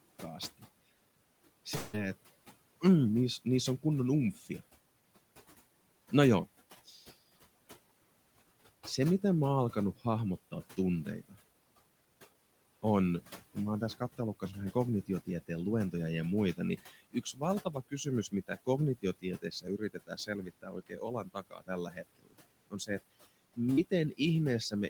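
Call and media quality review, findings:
Noise suppressor artifacts, throughout: background pumps down between phrases by about 19 dB and returns under speech. Suppressor gating steady room noise frame by frame.

Fading buzz smearing the last sound, 1.75–1.95 s, just before "että mm niissä"; about 0.2 s of audio never heard. Likely long network dropout, concealed by receiver extrapolation.

Speech cut by the noise suppressor: endings and soft phrases swallowed at 3.45–4.61 s (right after "että mm niissä"), 6.86–7.03, 8.97–11.36, 13.55–15.94, 16.57–22.90, 23.56–24.89 s. Speech misread as noise, dips about 11–22 dB.

Short concealed packet loss at 23.73–23.79 s: brief smeared wobble. About 40 ms missing, filled by continuing the preceding sound, then crossfaded back.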